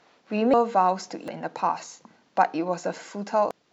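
Compressed frames are skipped at 0.54, 1.28 and 3.51 s. Whole frames, which fits a frame length of about 93 ms, are never decoded, so the speech jumps ahead by roughly half a second twice, then about 0.7 s.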